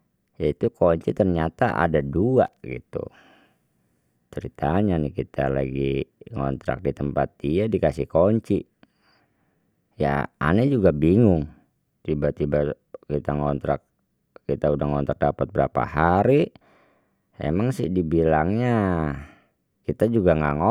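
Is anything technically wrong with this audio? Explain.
Yes. At 2.46 s, right after "kunci ternyata ada dua", the speech is broken by a short, irregular burst of scratchy crackle lasting about 0.1 s, ending at 2.57 s. This is loose connector crackle. A worn or dirty contact in the signal path flickers between connected and disconnected as it shifts, chopping the audio into fragments, and any DC present on the line turns each reconnection into a pop.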